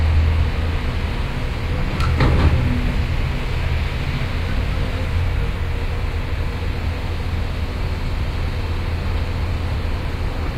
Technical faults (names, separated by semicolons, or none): none